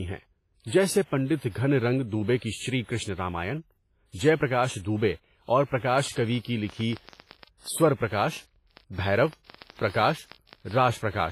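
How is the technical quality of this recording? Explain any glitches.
The recording has poor technical quality, with three faults.

Heavy WMA compression runs throughout. The sound is washy and ringing, with nothing above 15.4 kHz. This likely comes from a low-bitrate encode, around 24 kbps.

A train of clicks runs from 5.94 to 11.31 s, starting after "جے پرکاش دوبے اور". About 40 clicks arrive irregularly, roughly 7.1 per second, peaking about 5 dB above the speech. The likely cause is electrical interference or a faulty connection.

Pre-echo appears from 6.11 to 6.17 s. The codec spreads noise across its block, so a short hiss of about 52 ms comes before a sharp onset.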